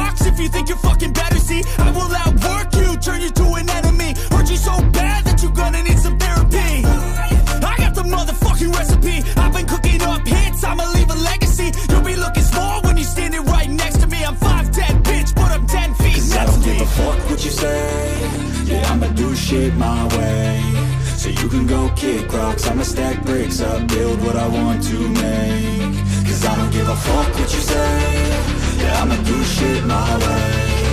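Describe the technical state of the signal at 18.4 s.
At 18.4 s the signal is just leaving a burst of processor overload crackle that runs from 17.87 to 18.40 s. The processor fell behind and missed its deadline for a few dozen very short audio buffers, each well under a millisecond, and every missed buffer came out as a hard-edged gap of silence. Strung together over that half second, those tiny dropouts sound like a gritty, tearing crackle riding on the sound. It stops as the load eases.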